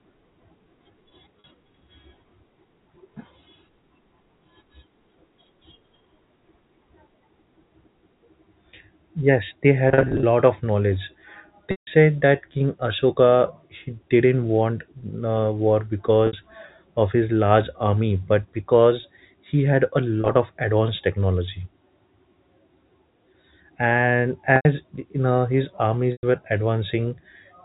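Packet loss with pitch repetition at 1.40, 9.89, 11.71 after "of knowledge", 16.27 after "didn't want uh war", 20.21, 24.56 and 26.12 s after "know his". The short gaps briefly hold a buzzy repeated pitch over the narrowband telephone sound, while the longer ones at 11.71 and 26.12 s fade into silence before the speech returns.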